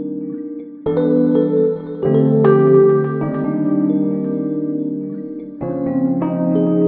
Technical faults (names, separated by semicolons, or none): none